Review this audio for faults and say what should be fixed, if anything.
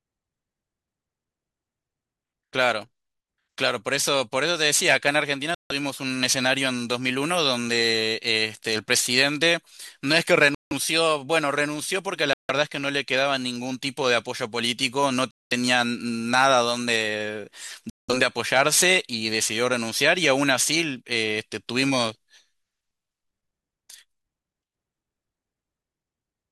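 Five hard gaps of silence, each about 0.16 to 0.2 s, interrupt the speech at 5.55, 10.55, 12.33, 15.31 and 17.90 s. These are likely Bluetooth stalls, where the headphone buffer ran dry while delayed packets were resent. They are clean silences rather than clicks or garbled concealment. To prevent them, reduce radio interference or enlarge the receive buffer.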